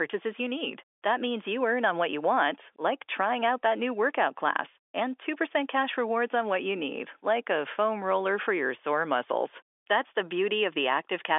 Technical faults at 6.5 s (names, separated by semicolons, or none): none